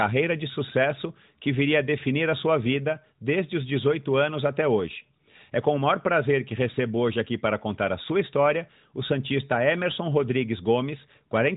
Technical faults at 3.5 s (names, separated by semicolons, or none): none